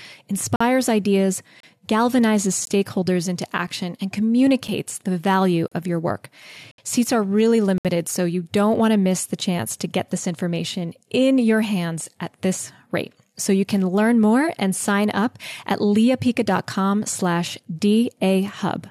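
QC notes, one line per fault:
0.56–0.61, 1.60–1.63, 2.65, 3.67, 4.68, 5.68–5.72, 6.71–6.78 and 7.78–7.85 s, gap between stream segments: hard-edged silent holes of 7 to 69 ms about once a second. Segment timestamps don't quite meet, so the player pads with silence. Nothing's missing, just a pause inserted.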